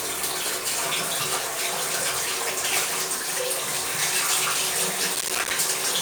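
From 5.15 to 5.51 s, processor overload crackle tears through the sound: the processor repeatedly missed its deadlines for short buffers, roughly 5 ms each, leaving dozens of brief silent gaps with hard edges. The waveform shows rapid dropouts to silence, and the spectrogram shows dense vertical broadband streaks.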